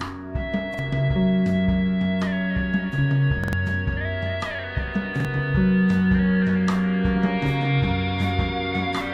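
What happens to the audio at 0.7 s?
At 0.74–0.79 s, a repeated buffer: new audio arrived late, so a 46 ms block, fitting a 2048-sample buffer, replays once with a hard join, producing a brief stutter.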